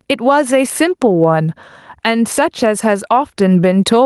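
Gain pumping runs through the whole speech clip. The level lurches by around 15 dB as a fast limiter or compressor clamps down on each loud syllable and lets go in the pauses. The likely cause is input gain set far too high for the microphone, leaving the dynamics stage to fight it constantly. The sound comes across squashed and breathing.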